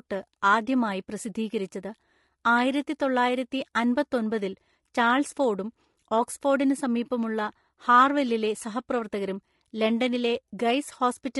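Speech carries low-delay AAC compression throughout, likely AAC-ELD near 32 kbps, sounding rough and grainy; a spectrogram shows noise filling between the harmonics and a thinned top band.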